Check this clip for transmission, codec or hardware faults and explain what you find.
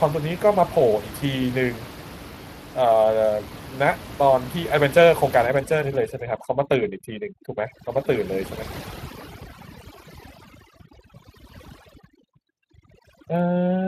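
Two faults are present. Speex codec damage runs through the whole clip. Overdone noise removal starts partway through.

The Speex codec is present from start to finish. Speex is a CELP coder. It models the voice as a filter driven by an excitation signal and spends a limited budget of bits on that excitation. The damage is plainly audible here. The speech has a hoarse, grainy edge. The sound fits a mid-range bitrate of about 22 kbps. Nothing is heard above 15.3 kHz.

Overdone noise removal begins at 5.46 s and lasts to the end. The room noise sits about 15 dB below the speech, and the denoiser treats those levels as noise. It pulls individual frequency bands down whenever they fall near its noise estimate. Quieter parts of the voice are cut along with the noise. The background drops and breaks up into twinkling specks.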